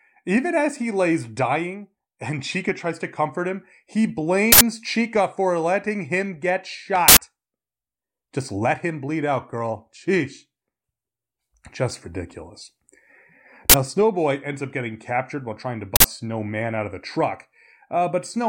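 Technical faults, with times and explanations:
4.52–4.61 s, 7.08–7.17 s, 13.70–13.74 s and 15.96–16.04 s, uninitialised buffer: four harsh, loud bursts of digital noise, just after "to comfort him he", "for letting him get" and "captured while trying to". Each is a block played before any audio was written into it, so stale memory came out as samples. Three last about 85 ms and one about 43 ms, which fits blocks of 4096 and 2048 samples.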